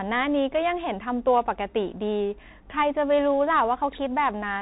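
Speech, with Bluetooth CVSD headset codec damage throughout. Nothing passes above 3.8 kHz. The one-bit delta coding, which fits a 64 kbps stream, leaves scratchy s sounds and granular hiss.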